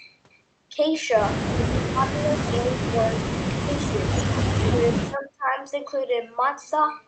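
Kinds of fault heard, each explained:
Speech suppressed in double talk: the speech dips sharply, by up to about 20 dB, and breaks into pieces in four stretches between 1.55 and 5.55 s. The likely cause is an echo canceller ducking the talker while the other side spoke.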